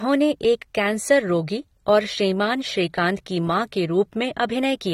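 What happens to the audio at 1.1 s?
At 1.1 s, as throughout the clip, the speech has plainly audible AAC compression damage, with nothing above 15.9 kHz, likely from low-bitrate coding quantising away detail.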